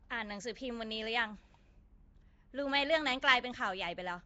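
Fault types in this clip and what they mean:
Nellymoser compression: the speech has a rough, hissy halo and a smeared, underwater quality, with nothing above 7.7 kHz, likely from Flash's Nellymoser Asao codec at about 32 kbps. Unlike MP3 warble, starved bands return as filled-in hiss rather than chirping tones.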